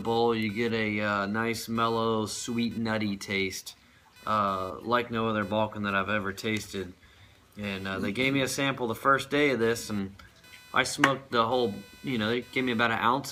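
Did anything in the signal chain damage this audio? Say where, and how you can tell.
Yes. At the analogue wiring stage, computer activity noise runs through the whole clip: a buzzy, chirping layer that swells and fades with the computer's workload, not with the sound being recorded. Its pulses repeat at around 500 per second and sit roughly 30 dB below the signal. Changing processor and graphics load shifts current through the ground shared with the audio circuit, and the input picks up that ground movement. A spectrogram would show a comb of lines at about 500 Hz and its multiples, flickering independently of the program.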